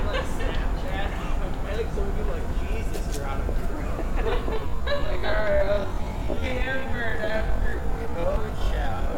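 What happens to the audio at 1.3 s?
At 1.3 s the audio runs on intact, with no dropout, click, distortion or other fault at that moment.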